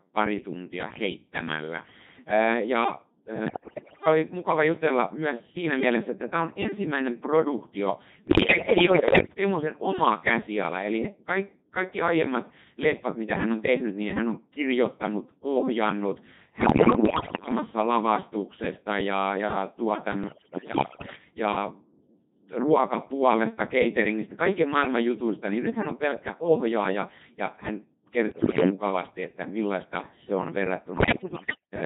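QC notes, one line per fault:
throughout: Codec 2 vocoder. The speech sounds robotic and buzzy, with heavy codec damage, because at 2.4 kbit/s only pitch, voicing, energy and a spectral envelope are sent and the decoder rebuilds the voice from sine waves rather than keeping the original waveform.
3.46–4.06 s, 8.28–9.34 s, 16.62–17.52 s, 20.24–21.16 s, 28.32–28.70 s, 30.98–31.72 s: bit errors on digital voice radio. The voice lurches in pitch, level and tone colour, breaking into bleeps, warbles and robotic gibberish, as before "oli mukava jutella myös" and between "hän on kirjoittanut ohjannut" and "lavastuksesta ja ja". Flipped bits, at a rate from roughly one in ten to one in five, corrupt the parameters that set each whole frame.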